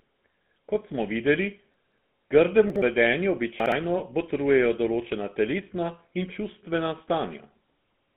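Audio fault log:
Throughout: GSM full-rate codec. The sound has a steady buzzy, gravelly roughness, and the band is held between about 150 Hz and 3.5 kHz. This fits a 13 kbit/s coder that rebuilds a coarse, pulse-driven excitation. Unlike dropouts, the damage never comes and goes.
1.74–1.98 s, 2.7–2.82 s, 3.6–3.72 s: chunks out of order. At each spot, a 60 ms piece of audio arrives late and plays after the pieces meant to follow it, three pieces late at 1.74 s and one piece late at the other two. The result is a brief jumbled stretch framed by hard joins. Nothing goes missing, so the level never drops to silence.
3.98–4.01 s: lost GSM frames. For about 20 ms the sound is held as a short, rough, metallic ring, which fits a single lost frame patched by repeating the last good one. It is too brief to fade toward silence, and unlike the reordering it leaves no jumbled fragment behind.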